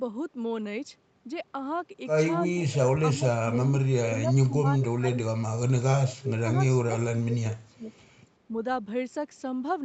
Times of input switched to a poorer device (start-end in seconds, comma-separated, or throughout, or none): none